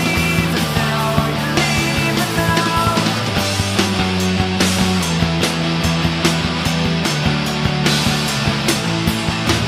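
No technical faults are audible.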